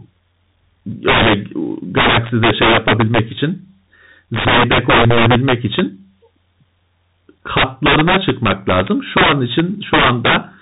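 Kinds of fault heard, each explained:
Integer overflow: Present throughout the speech, this happens when the signal is driven about 11 dB past full scale and the arithmetic wraps instead of saturating. Any sample over the limit jumps to the opposite extreme, so each loud peak becomes a full-range spike. Roughly one sample in twenty is affected, concentrated on the strongest syllables, giving harsh, violent cracks that sound far more abrupt and brittle than ordinary clipping.
Bluetooth CVSD headset codec: Also present across the whole clip, this narrowband headset coding sends a single up-or-down bit per sample, consistent with a 64 kbit/s stream, and adapts its step size as it goes. Everything above 4 kHz is missing, so the speech sounds boxed-in and dull. Fast, loud high-frequency moments outrun the step and smear, s sounds turn scratchy, and a granular hiss sits beneath the speech, all plainly audible here.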